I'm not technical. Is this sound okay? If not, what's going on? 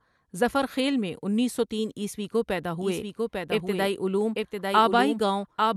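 No. From 2.81 s, right after "انیس سو تین عیسوی", a doubled audio track starts: a second, somewhat quieter copy of the speech runs about a second behind to the end, with no echo tail. Likely a second recording path or editing mistake.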